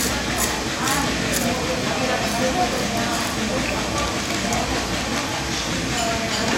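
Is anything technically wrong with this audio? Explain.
No, there are no faults.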